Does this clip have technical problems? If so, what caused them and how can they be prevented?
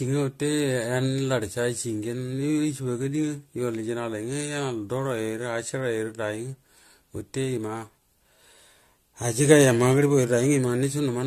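Yes. Throughout, the speech sounds swirly, smeared and hollow, with blurred consonant attacks and nothing above 14.3 kHz. The likely cause is generation loss: the audio was decoded and re-encoded several times, pointing to about four passes of an AAC-type codec near 64 kbit/s, each adding fresh quantisation noise and spectral holes. To prevent it, keep a lossless master and encode to the lossy format only once, at the final step.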